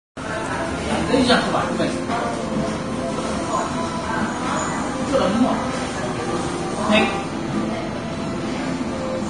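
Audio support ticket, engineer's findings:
Vorbis compression artefacts throughout, plainly audible. Hissy, grainy treble, roughened tones, smeared attacks. Likely a low-bitrate Vorbis encode, fitting roughly 31 kbps: lowered cut-off, treble residue quantised so coarsely that fine detail turns into noise of similar energy.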